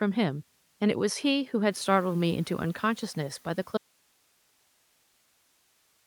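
At 1.71 s, just after the room noise jumps by about 14 dB, the noise suppressor is catching up: its noise estimate lags, so the louder noise passes through with less reduction at first, then sinks by about 5 dB as it adapts by 3.2 s. That gradual settling distinguishes it from the room itself getting quieter.

From 3.78 s to the end, the speech cuts off abruptly into an audio dropout to a faint residue: only hiss remains, roughly 40 dB below the speech. The sudden edge rules out a pause or fade, and the likely cause is signal loss upstream while the later path stayed live.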